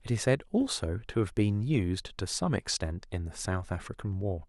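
No technical faults can be heard anywhere in this recording.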